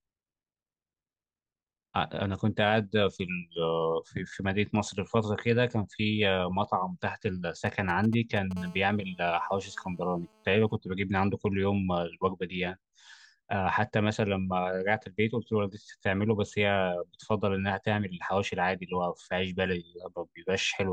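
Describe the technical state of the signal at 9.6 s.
At 9.6 s you're right in the middle of a GSM phone buzz running from about 8.57 to 10.77 s. A 2G handset nearby is transmitting in bursts at roughly 217 Hz, and the audio circuitry rectifies those radio pulses into the signal. You hear a hard, raspy buzz stacked with harmonics, sitting about 28 dB below the speech. It stays steady throughout, which fits a phone on an active call.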